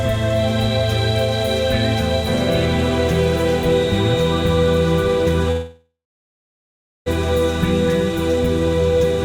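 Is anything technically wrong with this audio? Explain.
Yes, two things. From 3.59 s to the end there's a feedback whistle, a thin steady tone at 3.7 kHz sitting roughly 20 dB under the music and slowly swelling and fading in level. It's likely a speaker-to-mic loop hovering right at the edge of feedback, so one frequency keeps ringing without blowing up.

Then at 5.51 s to 7.08 s there's a call audio freeze. The music stalls into a fading buzz or hiss and then about 1.1 s of silence before picking up exactly where it stopped. It's likely delayed packets draining the jitter buffer, so nothing is lost but a 1.5 s gap gets inserted.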